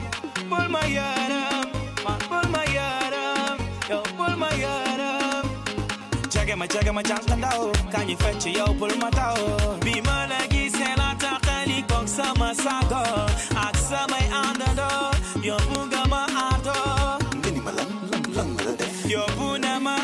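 At 7.75 s and 15.75 s, sharp clicks mark a file header played as audio: header bytes, repeating every 8 s, are being reproduced as samples at chunk joins.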